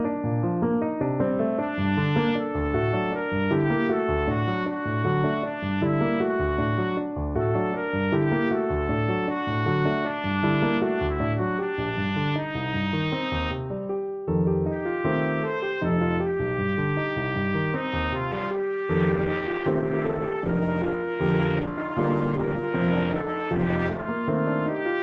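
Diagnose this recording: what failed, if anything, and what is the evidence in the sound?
A call bitrate drop at the codec stage: from 18.33 s to 24.13 s the encoder was starved of bits, which fits a fall from about 48 to 12 kbps. The sound turns coarse and watery, and its top end narrows from 20 kHz to 12 kHz.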